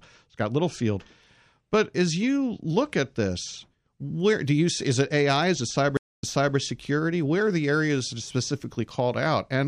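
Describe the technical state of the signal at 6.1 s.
At 6.1 s a stream reconnect is under way (5.97 to 6.56 s): the connection dropped, and after about 226 ms of silence the speech resumes roughly 0.37 s earlier, repeating material.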